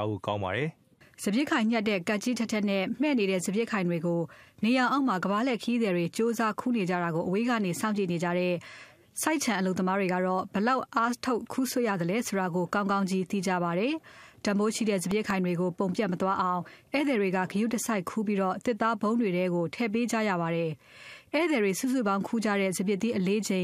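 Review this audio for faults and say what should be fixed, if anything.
A burst of processor overload crackle runs from 15.04 to 15.30 s. Several very short buffers, each under a millisecond, missed their deadlines in quick succession. Each missed buffer was filled with a sliver of old audio with hard edges, so the sound tears grittily. A single dropout would give one clean gap, but this is a tight cluster of repeated fragments that stops once the load eases. To prevent it, use a larger audio buffer or reduce processing load so every buffer finishes on time.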